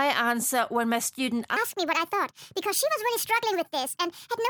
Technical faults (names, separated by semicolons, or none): wrong sample rate